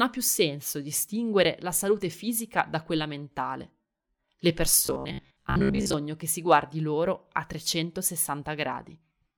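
From 4.86 to 5.93 s, before "che si guardi loro", the speech turns robotic, likely from repeated short buffers: a rigid 66.7 Hz buzz that follows the voice only roughly.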